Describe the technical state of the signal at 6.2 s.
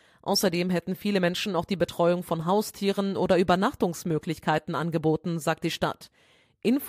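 At 6.2 s the speech signal is intact, with no audible fault at that moment.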